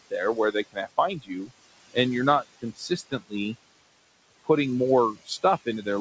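From the start of the clip to its end there are noise suppressor artifacts. The suppressor pulls down the bands it judges to be steady room noise, frame by frame, by about 17 dB. The room noise, sitting about 15 dB below the speech, drops away in the gaps and returns under the speech. The top of the band stops near 8 kHz, which fits a G.722 call codec.

From 1.15 to 1.51 s, just before "and you're not", there is speech cut by the noise suppressor. The suppressor treats part of the speech as noise and lowers it by up to about 17 dB, over roughly a fifth of a second in total. Soft sounds in that stretch come across as swallowed. It happens again from 2.62 to 3.33 s, just after "and you're not". Here the deepest drop is about 18 dB and roughly 0.3 s of speech is affected, leaving those parts faint and indistinct.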